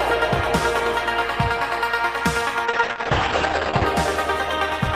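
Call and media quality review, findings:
Call bitrate drop, 2.7 to 3.97 s: bandwidth estimate fell and the Opus encoder was starved, consistent with a drop from 32 to 9 kbps. Highs cut above 8 kHz, sound muffled, clears after.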